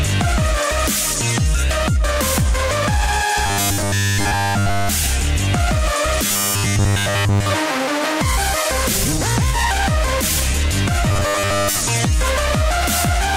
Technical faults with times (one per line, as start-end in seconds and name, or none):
3.46-4.89 robotic sound from repeated short buffers
6.26-7.50 robotic sound from repeated short buffers
11.10-11.81 robotic sound from repeated short buffers